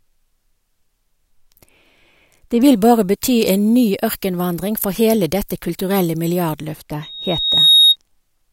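From 2.61 s to 6.73 s the speech turns thin, bright and hissy, with the top end up about 13 dB at 10 kHz relative to 1 kHz. That's pre-emphasis left on. The treble lift, which fits the FM 75 µs curve, never got its matching de-emphasis cut.

Then at 7.02 s a loudspeaker feedback squeal kicks in, a single 3.7 kHz tone that swells over most of a second and ends up a few dB louder than the speech. The mic was picking up its own speaker, and the loop gain at that frequency went past one. It dies at 7.96 s.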